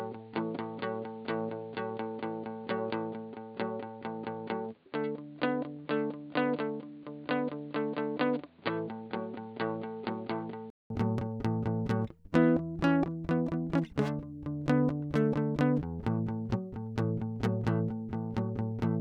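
The music sounds dull and quieter until 10.9 s, with nothing above 4.7 kHz, then clears after a 200 ms gap, likely from an input switched to a poorer device.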